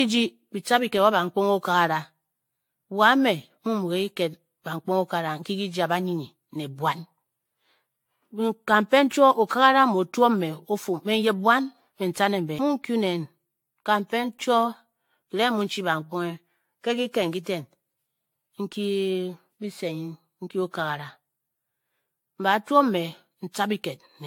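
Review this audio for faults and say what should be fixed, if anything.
Generation loss runs through the whole speech recording. The sound has a swirling, hollow character, smeared consonant attacks and no content above 18.7 kHz, more damage than a single lossy encode at this quality would leave. That points to an AAC-LC chain around 96 kbit/s, likely decoded and re-encoded about seven times. Each pass requantised on a shifted frame grid, so noise and spectral holes accumulated. Fix it by returning to an earlier-generation or lossless source, and keep intermediate edits in PCM, encoding to a lossy format only once at final delivery.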